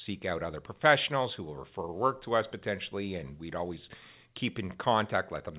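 No technical faults are audible.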